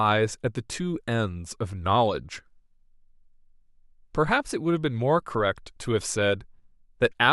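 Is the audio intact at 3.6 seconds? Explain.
Yes, the speech at 3.6 seconds is intact, with no dropout, click, distortion or other fault at that moment.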